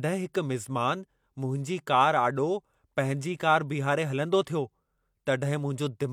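No technical faults can be heard anywhere in the speech. At no point does anything in the audio stand out as a fault.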